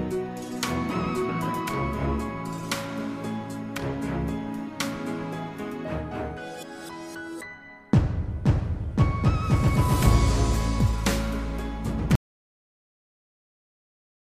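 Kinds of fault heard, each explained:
Audio dropout to silence: at 12.15 s the sound cuts off abruptly in mid-flow and never returns, leaving about 2.1 s of complete silence through to the end of the file. No room tone or noise floor survives in that stretch, so the recording chain kept writing silence after its input vanished. The likely cause is a lost input, such as a disconnected device, a failed link or an accidental mute. Whatever followed is unrecoverable.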